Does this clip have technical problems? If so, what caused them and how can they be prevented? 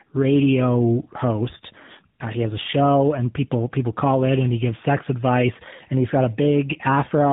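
Yes. Tandem speech coding: the call was coded with GSM full rate at 13 kbit/s, carried as G.711 mu-law, then recoded with AMR-NB at 12.2 kbit/s, so the second coder compounded the first one's errors. Throughout, the speech sounds rough, muffled and warbly, with nothing above 3.8 kHz. Negotiating a single codec end to end, or using transcoder-free operation between the networks, would keep the speech from being coded twice.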